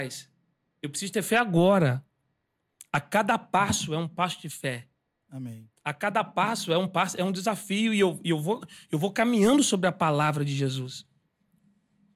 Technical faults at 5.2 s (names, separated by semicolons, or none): none